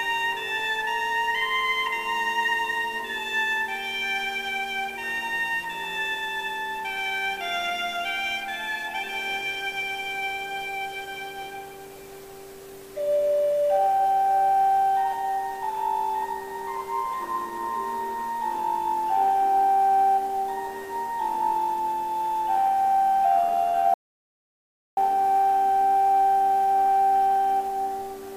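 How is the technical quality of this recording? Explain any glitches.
The recording has one clear glitch, an audio dropout to silence from 23.94 to 24.97 s. The input feed was likely interrupted, perhaps by a brief disconnection or an accidental mute, while the recorder kept writing silence. The sound cuts off abruptly mid-flow and the gap is dead silent, with no room tone underneath. It resumes just as suddenly, and about 1.03 s of audio is simply missing.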